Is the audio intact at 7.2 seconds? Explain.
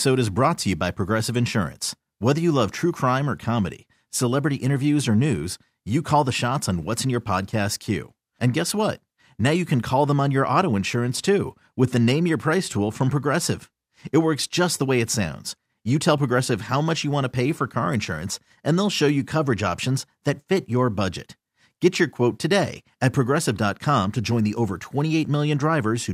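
Yes, at 7.2 seconds the speech plays through cleanly, with no dropout, click, distortion or other fault to be heard at that moment.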